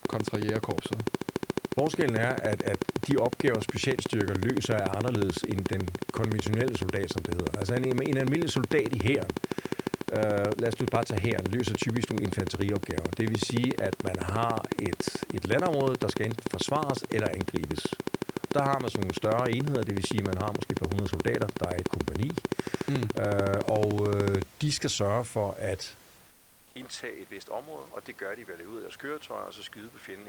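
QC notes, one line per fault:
0.05–24.43 s, train of clicks: regular ticking about 13.7 per second, roughly 300 clicks, peaking around 20 dB above the speech and audible in pauses, likely from interference; thin evenly spaced vertical lines on a spectrogram.
26.00–30.28 s, input switched to a poorer device: about 200 ms of silence, then duller, roughly 10 dB quieter sound with nothing above 8.7 kHz and new noise about 30 dB down, likely a headset call profile; a hard spectral ceiling appears.
26.27–26.75 s, comfort noise in place of the background: for 480 ms the room background becomes a smooth, featureless hiss about 3 dB quieter, likely Opus discontinuous transmission filling the pause; a uniform band on the spectrogram.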